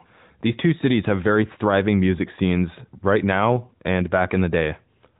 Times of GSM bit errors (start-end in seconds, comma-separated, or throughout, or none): none